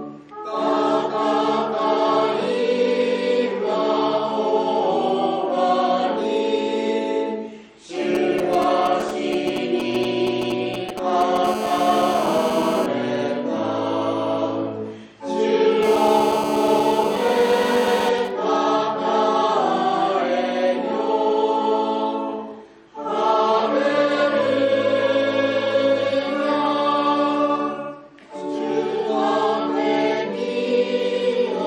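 From 8.15 to 11.46 s come GSM signalling bursts. A nearby 2G phone is exchanging control traffic, and the audio circuit rectifies its radio pulses into a galloping dit-dit-dit of short 217 Hz buzzes, roughly 10 dB under the sound. At 11.47 s this becomes a steady GSM phone buzz that lasts until 12.86 s and returns from 15.83 to 18.09 s. The phone is now in a call, so the hard, harmonic-rich 217 Hz rasp runs unbroken at about 8 dB below the sound instead of arriving in groups. From 18.18 to 19.71 s it breaks back into intermittent bursts, weaker at around 20 dB down, because the call continues while the phone's user is silent.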